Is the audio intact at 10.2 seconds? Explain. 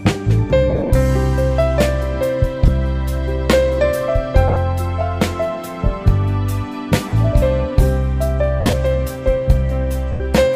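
No. From 10.12 to 10.20 s, lost LE Audio frames leave an 80 ms gap, which fits about eight lost frames. The LC3 decoder repeats the last spectrum with random signs. Tones become a noisy smear that fades over the later frames.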